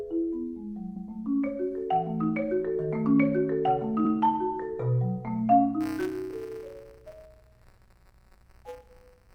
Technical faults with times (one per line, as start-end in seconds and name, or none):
0.95-1.07 repeated frames
4.04-4.11 repeated frames
5.80-9.35 buffer tearing